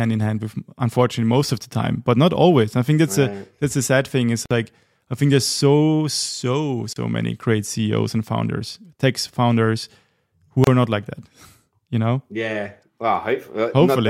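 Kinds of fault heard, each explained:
Gap at a join of encoded pieces: separately encoded segments were joined untrimmed, keeping encoder padding. Silences of 30 to 50 ms cut into the speech. It then resumes.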